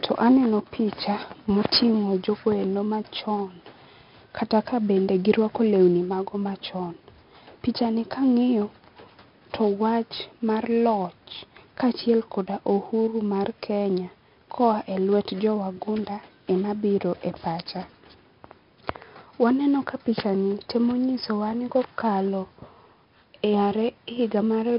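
Speech, heavily damaged throughout by 4-bit ADPCM compression: coarse adaptive steps leave gritty hiss on loud passages and distorted attacks, with nothing above 5.3 kHz, which fits about 44 kbps.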